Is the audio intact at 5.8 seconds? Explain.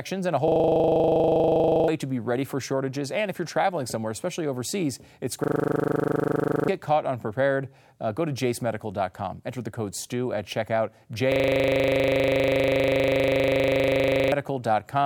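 No. A system hang loop runs from 5.44 to 6.68 s. A frozen system replays one 40 ms piece, producing a 25 Hz buzz. About 1.5 s of speech is lost.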